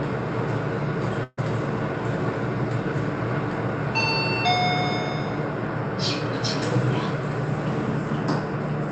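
From 1.23 to 1.39 s, a burst of packet loss leaves about 140 ms missing; the receiver stretches the preceding sound into a fading hiss before the audio jumps ahead.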